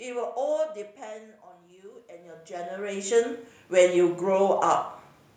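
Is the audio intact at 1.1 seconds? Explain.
No. At 1.1 s the automatic gain is rising, from 1.01 to 4.09 s: after the input dropped about 15 dB, gain climbs about 12 dB, swelling voice and room noise together, a gradual envelope ramp on the waveform.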